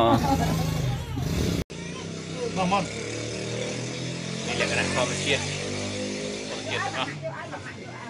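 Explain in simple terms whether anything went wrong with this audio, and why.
Input switched to a poorer device at 1.62 s: after a brief 80 ms gap, the sound turns duller and noticeably quieter, with nothing above 10.5 kHz and a faint new background noise, likely because recording moved to a lower-quality microphone or headset.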